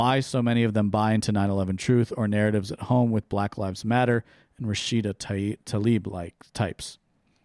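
No technical faults can be heard anywhere in it.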